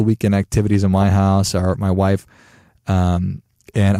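Speech with microphone overload from 0.01 to 1.41 s, ending just before "are my", and again from 3.78 to 3.92 s: peaks run about 3 dB and about 2 dB past the converter's limit, likely from excessive input gain. Flattened tops add harsh crackle, and in the second around a tenth of samples clip.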